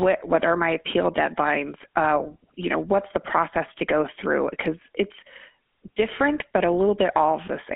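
Speech carried through the GSM full-rate codec for the whole clip. The band runs only from about 200 Hz to 3.4 kHz, and on top of that narrowing the voice has a buzzy, gravelly roughness. This comes from the codec rebuilding the vocal tract from a sparse, regularly spaced pulse excitation, and the plainly audible damage fits the 13 kbps full-rate mode. A clean telephone band-limit alone would sound muffled but smooth. The grain is what marks this codec.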